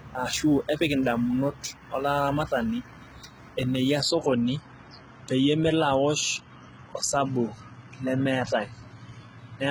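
A speech clip with a gritty, lispy top end from start to finish. The s sounds turn metallic, and nothing is heard above 11.8 kHz. The likely cause is heavy HE-AAC compression, at a very low rate near 16 kbps. The treble is rebuilt by copying lower bands upward, so its harmonics don't line up with the real ones. From 0.0 to 3.99 s there is also sample clock jitter. A fine hiss and roughness ride on the sound and swell on loud, bright passages. The converter clock wanders by around 5 microseconds, leaving errors about 30 dB below the signal.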